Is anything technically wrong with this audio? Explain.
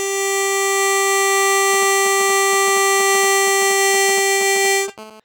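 Yes, the music is interrupted by interference from a nearby 2G mobile phone.

GSM signalling bursts run from 1.73 to 4.90 s. A phone close to the equipment sends brief groups of radio bursts while it signals to the network. The audio circuitry rectifies those pulses, turning each group into sound. The result is a galloping dit-dit-dit of short 217 Hz buzzes, unrelated to the music. It sits roughly 15 dB below the music.

GSM phone buzz follows from 4.98 to 5.20 s, lasting about 0.22 s. Here the phone transmits in bursts in call mode, pulsing 217 times a second, and the circuitry demodulates that steady train of pulses. The sound becomes an unbroken, hard, raspy buzz at 217 Hz, rich in harmonics. It sits about 21 dB below the music, so it is quieter than the earlier bursts.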